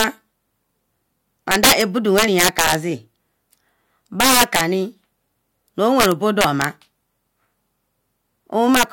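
Integer overflow breaks up this speech six times. The first hit comes right at the start, 0.00 to 0.04 s, driven about 5 dB past the limit. Then 1.51 to 1.81 s at about 8 dB, 2.18 to 2.75 s at about 6 dB, 4.20 to 4.61 s at about 8 dB, 6.00 to 6.64 s at about 3 dB, and 8.75 to 8.83 s at about 6 dB. In each span, peaks exceed the integer ceiling and wrap to the opposite extreme instead of being held. The result is harsh, violent cracks, far sharper than clipping.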